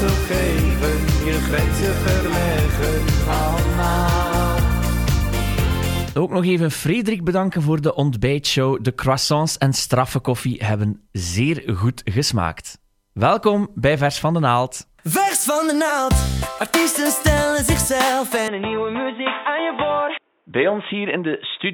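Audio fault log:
18.48–21.74 s, input switched to a poorer device: the sound turns dull, with nothing above 3.8 kHz, drops about 5 dB and gains a new noise floor far below the signal, likely from a narrower-band input taking over. On a spectrogram the upper band is abruptly cut off, and the waveform steps down with no gap.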